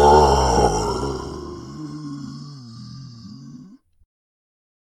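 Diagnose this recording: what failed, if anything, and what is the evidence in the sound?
Zipper noise from 0.8 to 1.44 s: the gain drops roughly 20 dB in unsmoothed 1 dB steps, about thirty a second, and each step ticks. That points to a buffer-level gain stage.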